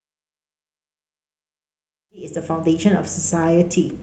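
No technical faults can be heard in this speech recording. The level rises in a smooth fade-in from roughly 2 s and reaches full level at 2.75 s, with no click or hard edge.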